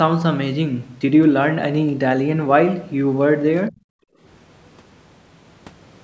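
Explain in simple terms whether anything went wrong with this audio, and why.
Two problems come from the call's echo canceller. From 3.7 to 3.84 seconds there was likely speech suppressed in double talk: with both sides talking at once, the canceller mistook this talker's voice for loudspeaker echo and turned it down, so the speech briefly drops sharply.

From 4.12 to 4.21 seconds the background was gated by the echo canceller: while the loudspeaker was playing, the canceller pushed the microphone down hard, so the room sound dips for about a tenth of a second and then comes back.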